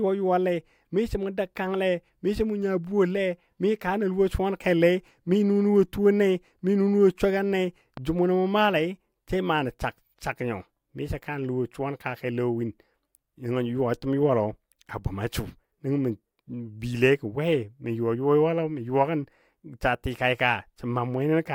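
No technical faults can be heard anywhere in the speech recording. Nothing interrupts or disturbs the audio at any point.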